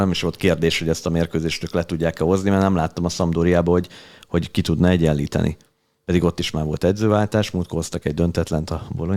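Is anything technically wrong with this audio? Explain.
No, nothing technically wrong can be heard here.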